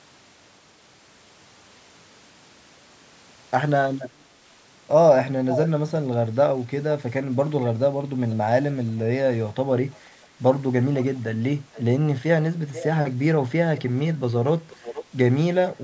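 At 5.5, 8.3, 10.94, 11.73, 12.73, 13.77 and 14.7 s, a delayed copy of the speech returns about 485 ms late. This is echo leak. A loudspeaker's echo canceller likely let some sound through. The first scrap is nearly as loud as the speech. Later ones are faint and brief.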